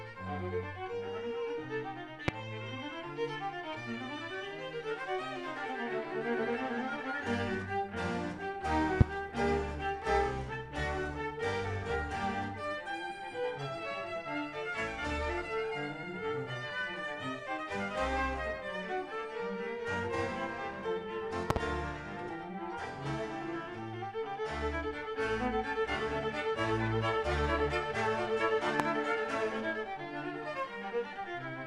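Loud pops hit at 2.28–2.31, 9.01–9.03, 21.50–21.59 (a double pop) and 28.80–28.82 s. Each jumps roughly 25 dB above the sound, which continues underneath. A likely voltage spike is the cause.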